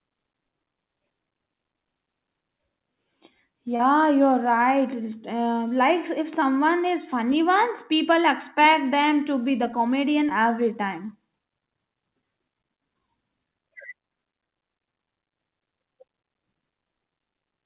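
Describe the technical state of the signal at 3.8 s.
Short concealed packet loss runs from 3.76 to 3.81 s. About 40 ms of the call audio never reached the decoder in time, and the receiver bridged 32 ms of it by extending the preceding sound before blending back, which leaves a brief smeared wobble in the speech.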